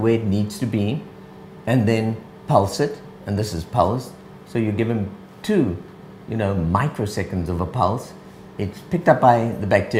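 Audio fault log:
Nothing stood out on listening.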